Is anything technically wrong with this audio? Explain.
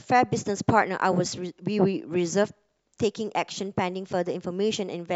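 No, nothing is technically wrong with this audio.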